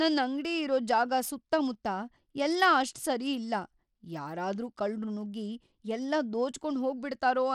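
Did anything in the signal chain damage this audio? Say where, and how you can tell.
Yes, at the codec stage, and it runs the whole length of this speech clip. Nothing survives above 17.4 kHz, and there's a plainly audible grit with flickering treble. That's likely Bluetooth SBC compression starved of bits, which fits roughly 96 kbps, with the top sub-bands getting dropped and the rest coarsely quantised.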